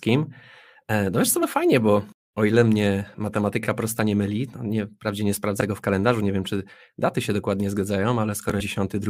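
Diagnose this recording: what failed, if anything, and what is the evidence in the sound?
Three brief glitches cut into the speech: at 1.42 s, between "no wiesz co" and "fajnie bo o ile"; at 5.60 s, between "no nie wprawdzie nie" and "w kalendarzu nie wiem"; and from 8.59 to 8.61 s. These are damaged data in a compressed stream, a codec-stage failure. Corrupted bytes made the decoder misread or refuse those frames, lose sync, and hunt for the next valid frame header before decoding cleanly again.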